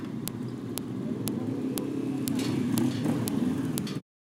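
Sharp, loud clicks snap through the sound at 0.28, 0.78, 1.28, 1.78, 2.28, 2.78, 3.28 and 3.78 s, one every half second. This is a file header played as audio: the clip was joined from 0.5 s WAV pieces, and each piece's header bytes play as samples.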